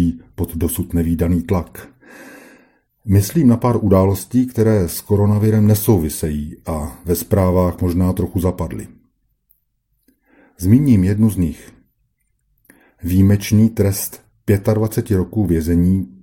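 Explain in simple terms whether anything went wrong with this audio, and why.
Nothing went wrong with this audio, because no technical fault can be heard anywhere in it.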